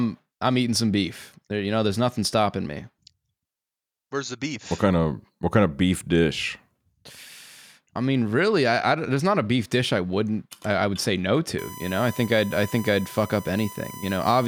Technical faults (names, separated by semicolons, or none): USB whine